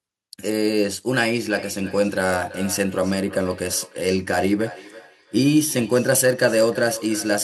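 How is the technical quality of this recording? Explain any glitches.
The recording has a clear fault: feedback echo between two devices, from 1.5 s to the end. Two devices in the same room are on one call, so one device's loudspeaker replays what the other's microphone sent, and that microphone picks it up again. Each device's echo canceller only removes its own playback, so the loop is never cancelled. Each word returns roughly every third of a second, thinner and more ringing, peaking about 16 dB below the speech.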